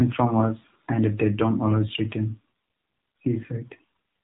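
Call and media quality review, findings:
AMR narrowband mobile codec throughout the clip: speech passed through a low-rate narrowband mobile path, consistent with AMR-NB near 7.4 kbps. Nothing above 3.8 kHz survives, so the speech sounds muffled, and the sparse pulse excitation leaves it plainly buzzy and synthetic.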